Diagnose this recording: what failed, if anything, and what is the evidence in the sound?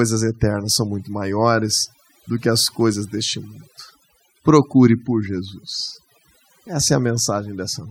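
Overdone noise removal in the processing stage, present throughout. The reduction gate pulls individual frequency bands far down whenever they sit near its noise estimate, so the background drops and breaks up into twinkling specks. A spectrogram would show isolated bright dots in black gaps.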